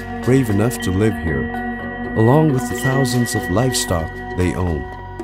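From 1.12 to 2.54 s, channel delay causes comb filtering. One channel arrives a tiny fraction of a millisecond late, a few samples, and the mono sum cancels at evenly spaced frequencies. The first notch falls near 7 kHz, so the top end sounds hollow and dulled.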